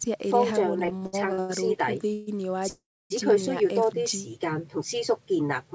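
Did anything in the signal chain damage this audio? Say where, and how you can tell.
Yes. Between 0.86 and 1.51 s the network side shows repeated stalls (stutter): six gaps, the longest 91 ms, with the receiver stretching the last sound to fill about 289 ms. That's 44% of the span concealed, so nothing's lost, but it drags and stumbles.

At 1.80 s there's a block of digital silence, just 3.6 ms long with no fade either side, so it lands as a tick. That points at the driver or output buffer not being filled in time, not at the network.

Two call audio freezes follow. From 2.13 to 2.29 s the sound hangs as a fading buzz or hiss for about 138 ms. From 2.69 to 3.12 s it holds for 412 ms, decaying into about 280 ms of silence. Both pick up exactly where they stopped, likely from packets held up in transit.

Between 3.85 and 4.30 s there's a jitter buffer slow-down: the receiver repeats tiny pitch periods to rebuild its reserve, adding 37 ms. 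Playback runs at about 94% speed with unchanged pitch, so sounds come out slightly drawn out.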